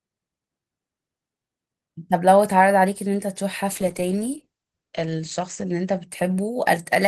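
At 3.73 s a call bitrate drop sets in and lasts to the end. The speech turns rough and watery, which fits a fall from about 48 to 12 kbps. Top frequencies are cut from 20 kHz to 8 kHz. The worst stretch lasts 1.66 s.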